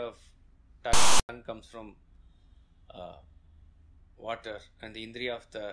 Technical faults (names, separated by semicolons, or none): file tags played as audio